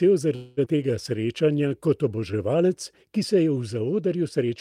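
Packets from 0.35 to 0.59 s were likely held up in transit until the jitter buffer ran dry, producing a call audio freeze. With nothing new to play, the receiver stretched the last bit of speech into a buzzy, fading fill lasting 217 ms, never dropping to full silence. When the packets caught up, the speech resumed exactly where it had paused, so the freeze inserts a gap without removing any speech.

Just after, at 0.65 to 0.68 s, a block of speech was discarded in transit or from an overfull buffer while later audio was already queued, and playback makes a skip ahead. Roughly 150 ms of speech vanishes, and the two sides of the cut are stitched together with only 10 ms of fill. The speech lurches forward, the before and after butting together almost directly.

From 0.73 to 2.37 s the jitter buffer was short of reserve and set about rebuilding it, a jitter buffer slow-down. It repeated individual pitch periods and fragments of pauses over and over, adding 164 ms in total. 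The pitch stays where it was, but the speech runs at 91% of its normal speed, so sounds come out drawn out and the delivery feels dragged across that stretch.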